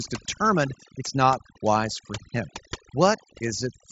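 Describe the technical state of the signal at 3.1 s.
At 3.1 s, overdone noise removal is active, as it is across the whole clip: aggressive spectral subtraction gates quiet bands, leaving near-silent background with twinkling specks, and speech below the 7.7 kHz headset band limit.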